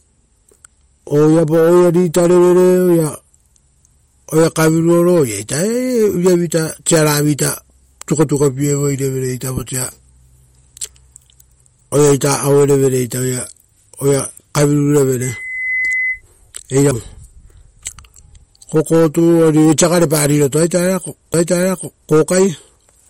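Throughout the speech, the encoding chain has likely starved an MP3 encoder of bits; the plainly audible damage points to a low rate of around 48 kbps. With too few bits, the encoder drops weaker frequency lines and lets them flicker between frames, giving the voice a watery, swirling texture and softening consonant onsets. Nothing sounds above 16.6 kHz, consistent with the encoder's fixed treble cutoff.

From 15.21 to 16.22 s, a loudspeaker feedback squeal appears: the microphone was picking up a speaker it was driving, and at 2 kHz the loop gain went above one. That tone feeds on itself, swelling over roughly half a second into a steady whistle that sits around 5 dB below the speech before it stops.

At 16.91 s and again at 21.33 s there is a CD skip, where the player's laser lost its track and jumped to a different turn of the disc's spiral. Each time the output mutes very briefly, a few milliseconds, which is heard as a tiny tick or dropout, and the speech then carries on from a different point on the disc rather than continuing smoothly from where it broke off.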